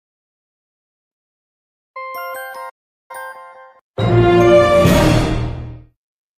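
A playback stall runs from 2.69 to 3.11 s: the sound halts mid-flow and the output falls silent for about 400 ms before resuming. The player likely ran short of data or had its playback thread blocked until it recovered.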